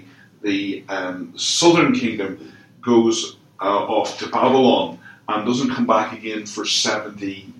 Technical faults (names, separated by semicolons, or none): none